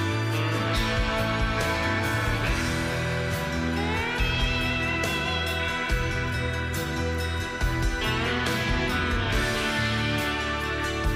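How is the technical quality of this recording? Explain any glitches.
Nothing here sounds off; there are no glitches to explain, and the recording stays steady all the way through.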